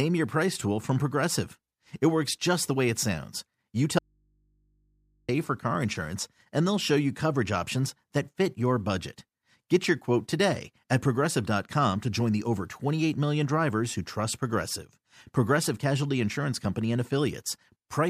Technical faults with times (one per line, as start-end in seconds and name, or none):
3.99-5.29 audio dropout to a faint residue